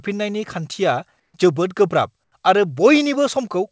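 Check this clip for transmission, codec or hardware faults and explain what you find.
There's one kind of fault in this speech clip: comfort noise in place of the background, in two short gaps, from 1.20 to 1.34 s (140 ms) and from 2.24 to 2.32 s (80 ms). The sender has likely stopped transmitting during pauses, leaving the receiver to fill in synthetic noise shaped like the room. The real background, about 55 dB below the loudest parts, becomes a flat, featureless hiss that's about 2 dB quieter in the first gap and about 7 dB quieter in the second. Nothing comes through above 8 kHz, which fits a G.722 call path.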